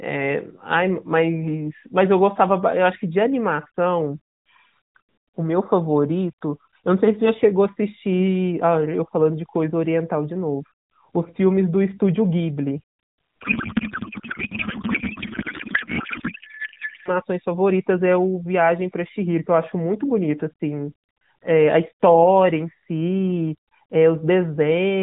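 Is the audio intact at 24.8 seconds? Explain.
Yes, the speech is intact at 24.8 seconds, with nothing at that moment beyond the narrowband character of the AMR mobile codec, which caps the audio at 4 kHz.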